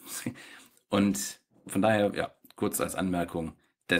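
Nothing in this speech recording stands out as a technical fault; there are no dropouts, glitches or other problems to point to at any moment.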